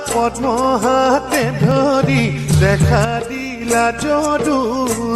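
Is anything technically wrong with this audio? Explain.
Yes, there are two faults. At 1.71 s, an overlap between stream segments trims a few milliseconds where segment timestamps collide, which fits 2-second segments. This causes a single tiny skip, not a dropout gap.

From 3.05 to 3.61 s the level falls abruptly by about 6 dB and then recovers. This is likely one channel dropping out before the mono sum, not a gain change or fade.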